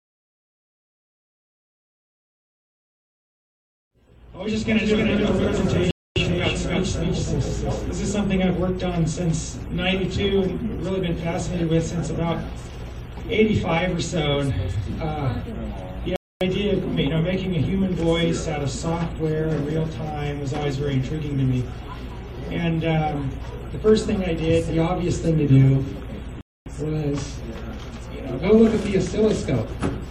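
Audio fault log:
5.91–6.16 s, 16.16–16.41 s, 26.41–26.66 s: gap between chunks, 250 ms silences recurring after each 10 s chunk, interrupting the sound at each chunk join.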